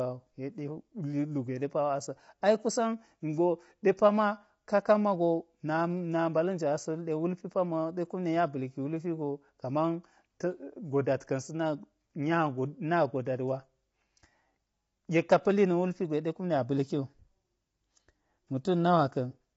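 Speech, with plainly audible coding damage throughout and nothing above 7.8 kHz, likely low-delay AAC compression (AAC-ELD) at a low bitrate, consistent with roughly 24 kbps.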